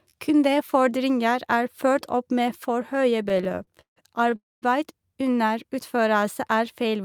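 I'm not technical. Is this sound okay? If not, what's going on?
No. From 3.23 to 4.34 s there are repeated stalls (stutter): the speech data kept arriving late, so the receiver ran dry 17 times and filled each wait by stretching the last sound. The longest wait was about 0.15 s. Nothing is lost, but the speech jerks and drags.

Right after, from 4.36 to 4.64 s, comes a call audio freeze. Its likely cause is a hold-up in the network that emptied the receiver's buffer. You hear a brief fading continuation, then about 0.2 s of silence, before the speech resumes where it stopped, a little later than before.

From 5.96 to 6.26 s a jitter buffer slow-down occurs. The receiver was rebuilding its reserve, so it repeated tiny slices of the sound, adding about 37 ms. The speech runs at about 90% speed with unchanged pitch, sounding briefly drawn out.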